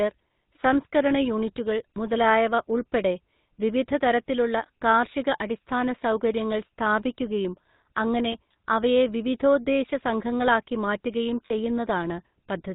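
The whole recording passes through the GSM full-rate codec. The speech sounds buzzy and gravelly. Nothing above 4 kHz survives, so the top end is dull. The coarse pulse excitation, which fits 13 kbps, causes this plainly audible roughness.

Lost GSM frames occur twice. From 8.32 to 8.35 s, just after "സ്ഥാപിക്കുകയും അങ്ങനെ", a brief metallic ring replaces the sound. This fits one missing 20 ms frame. The decoder repeated the previous frame. From 11.46 to 11.51 s, after "സംഘങ്ങളാക്കി മാറ്റുകയും", a longer ring fits two lost frames, about 40 ms.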